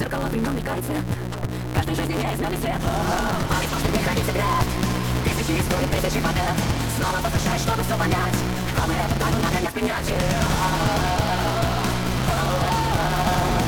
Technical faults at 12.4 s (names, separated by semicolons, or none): block size mismatch (truncated)